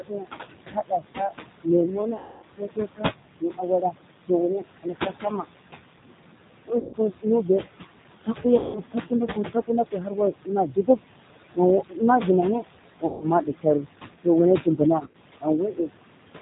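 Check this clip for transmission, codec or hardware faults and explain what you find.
Four kinds of fault are audible: a heavy noise suppressor and low-rate codec throughout, plus suppressor speech cuts and concealed packet losses at specific times.

Noise suppressor artifacts run throughout. The room noise, sitting about 9 dB under the speech, is pulled down by about 19 dB between phrases and then rises again under the speech. Unlike codec warble, this pumping follows speech pauses.

G.729 codec damage is also constant. The speech is band-limited below 4 kHz and sounds rough and synthetic, which fits an 8 kbit/s G.729 stream modelling each frame with a vocal-tract filter and sparse pulses. The roughness stays steady rather than gating with pauses.

Speech cut by the noise suppressor occurs from 0 to 5.47 s and from 11.55 s to the end. Parts of the speech are mistaken for noise and sink by up to about 21 dB, swallowing roughly 1.5 s and 1 s of speech respectively.

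VoIP packet loss concealed by the speech codec occurs at 2.18–2.45 s (240 ms), 6.79–6.97 s (140 ms), 8.58–8.80 s (170 ms), 13.06–13.26 s (150 ms), and 14.99–15.16 s, where short gaps of up to 30 ms are scattered. Each time, the decoder stretches the last frame into a fading sound, and the speech stays weak briefly afterwards. That extrapolated tail distinguishes these events from suppressor dips.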